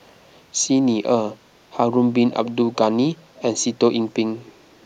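Speech with an echo leak in three scraps: 2.32 to 2.51 s, 3.17 to 3.64 s, and 4.46 to 4.52 s. Each is a faint copy of the voice trailing it by about 323 ms, roughly 20, 25 and 30 dB below the speech in turn, fainter still by the last. On a spectrogram it shows as pale, shifted ghosts of the harmonic bands. The likely cause is a far-end echo canceller letting loudspeaker pickup through.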